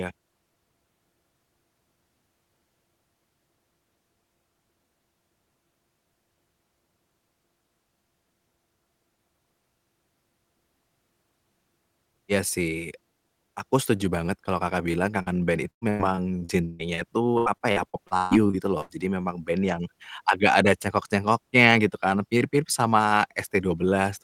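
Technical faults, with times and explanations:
14.91 s and 15.22 s, short concealed packet loss: Brief stretches of the call arrived too late to decode, about 20 ms and then about 40 ms. The receiver bridged each hole by extending the preceding sound, then blended back. This leaves a quick smear or wobble.
15.70 to 17.00 s and 17.38 to 18.91 s, repeated packet loss (robotic sound): Holes recur rapidly, seven in the first run and nine in the second, the longest lasting about 140 ms. Roughly a third of each span is patched by stretching the last sound forward. The speech turns choppy, with pieces missing.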